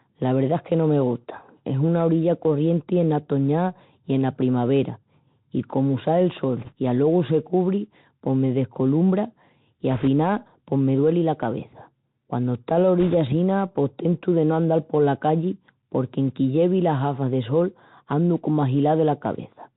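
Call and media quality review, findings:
Bluetooth CVSD headset codec, throughout: one-bit delta coding with adaptive step, consistent with a 64 kbps CVSD link. Band stops near 4 kHz, s sounds scratchy, granular hiss under speech.

Bit errors on Bluetooth voice link, 6.57–6.73 s, 9.91–10.08 s, 13.00–13.14 s: flipped bits at a few percent. Each bit weighs little, so a rushing crackle results, with no loud clicks.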